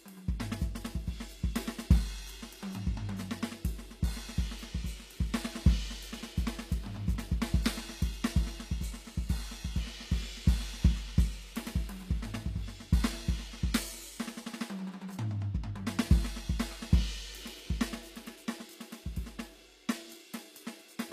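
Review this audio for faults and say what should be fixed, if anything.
The whole track has a top end that sounds bright but synthetic, a gritty, metallic sheen whose upper harmonics don't line up with what's happening lower down. That's the signature of HE-AAC compression: the encoder likely kept only the lower spectrum and rebuilt the treble by copying those bands upward under a coarse envelope. The damage is plainly audible from start to finish, which fits a low bitrate around 24 kbps. To prevent it, go back to the original source or re-encode at a much higher bitrate with plain AAC.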